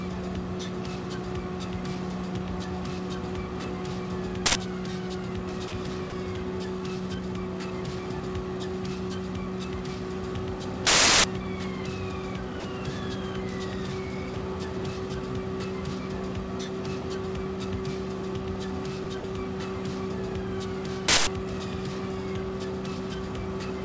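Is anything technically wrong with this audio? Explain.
Yes, there are two kinds of fault, heard through a call path with no content above 8 kHz, which fits G.722 at 64 kbps.

Uninitialised buffer, at 4.46 to 4.55 s (about 93 ms), 10.87 to 11.24 s (about 370 ms) and 21.08 to 21.27 s (about 190 ms): a buffer played before audio was written, so stale memory became samples. Each event is a loud crack or burst of digital noise with hard edges. The lengths fit 4096-, 16384- and 8192-sample buffers. A plain dropout would leave a gap instead of noise.

Sound dropped by the voice detector, at 5.68 s (40 ms), 6.10 s (20 ms), 12.60 s (40 ms), 14.34 s (20 ms), 17.02 s (20 ms), 19.04 s (20 ms) and 19.20 s (40 ms): the sound briefly gives way to steady comfort noise, likely because the sender's detector judged it background. Packet-loss concealment would repeat or smear the preceding sound instead.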